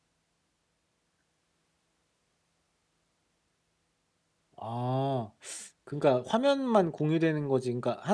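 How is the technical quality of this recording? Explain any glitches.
No glitches can be heard anywhere in this speech recording. There is nothing in it that calls for an explanation.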